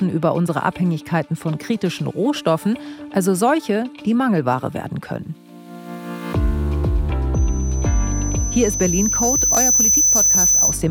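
From 7.34 s right through to the end at 10.90 s there's a loudspeaker feedback squeal. A mic is hearing the speaker it feeds, and around 6 kHz the loop gain tips past one, so that frequency keeps feeding itself. You hear a thin, piercing tone creep in and swell over a couple of seconds until it sits a few dB above the rest of the sound. Nobody breaks the loop, so it just keeps ringing.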